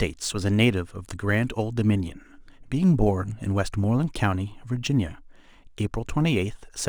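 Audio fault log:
throughout sample clock jitter: the converter's clock wanders by a few microseconds, so samples land slightly early or late and the error grows with the waveform's slope. This adds a hissy roughness roughly 35 dB below the speech, strongest on loud, bright sounds and absent in pauses.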